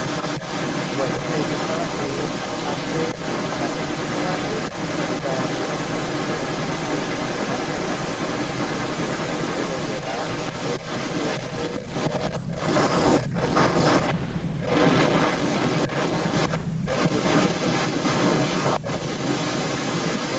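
A delayed copy of the speech runs under the direct signal for the full clip, trailing it by 213 ms at a level roughly 10 dB relative to the speech. This is an echo leak, likely from a far end playing the call on a loudspeaker, where the echo canceller did not fully remove what its microphone picked up and the residue was sent back. It sounds like a doubling a fifth of a second behind each phrase.

Short level dips interrupt the speech at 12.39–12.45 s, 14.2–14.56 s, 16.73–16.81 s and 18.8–18.86 s. These are speech suppressed in double talk. The echo canceller likely treated overlapping speech as echo and attenuated everything while both sides were active. Three of the dips are brief, about 70 ms and around 10 dB deep. The one at 14.2 s lasts roughly 300 ms and drops by about 15 dB. The audio carries nothing above 8 kHz.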